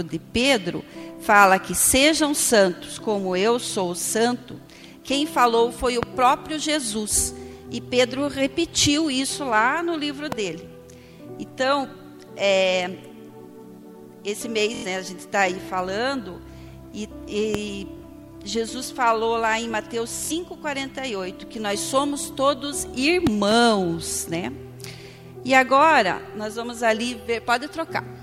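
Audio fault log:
6.03–6.05, 10.32–10.35 and 17.55–17.57 s, loud pop: Each is a single sharp pop that jumps out above the sound, about 20 dB over it at 6.03 s and about 15 dB at the other two, while the sound carries on underneath. The cause is likely a brief voltage spike, from a switch, static or a driver glitch, entering the signal path and being shaped into a short click by the circuits after it.
23.27–23.54 s, loud pop: Two pops in quick succession, each about 15 dB above the sound, with the sound continuing beneath them. The double strike likely comes from a sudden voltage step or pulse, from a plug, a switch, static or a driver glitch, entering the signal.
14.75–14.86, 17.97–18.04 and 20.25–20.31 s, Bluetooth stutter: Each is a short, buzzy repeat of one tiny slice of sound. The first is about 93 ms long, roughly four lost packets, and the other two are about 46 ms each, roughly two. 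Afterwards the sound picks up further along, as though it had kept playing. The receiver ran out of fresh data and replayed its last buffer until new packets arrived.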